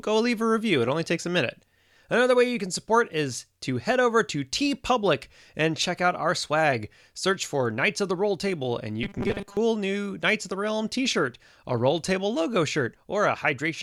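From 9.03 to 9.57 s there's robotic sound, a stiff 200 Hz buzz, likely 5 ms buffers repeated in place of about half the audio.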